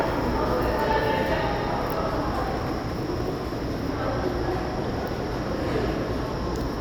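At 2.57 to 2.60 s a single loud pop rises a few decibels above the sound, likely a voltage pulse from static or a plug, while the sound continues unbroken beneath it, unlike a dropout.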